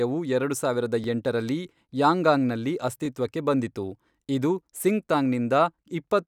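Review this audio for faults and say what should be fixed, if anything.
Overlapping chunks at 1.04, 3.05 and 5.07 s: each 2-second chunk starts about 13 ms before the last one ends, so that sliver plays twice and you get a quick stutter at every join. To prevent it, advance the read position by exactly one full chunk so the joins meet cleanly.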